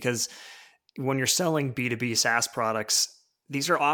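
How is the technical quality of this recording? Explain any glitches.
The technical quality of this recording shows no glitches to explain.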